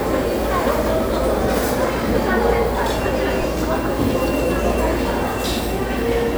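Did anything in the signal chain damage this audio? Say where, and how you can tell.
Yes. Chunks out of order, at the driver or buffer stage. Brief jumbled moments occur at 1.65 to 1.70 s and 3.41 to 3.44 s. A block of 11.61 ms plays three chunks late, then one late. Nothing is lost.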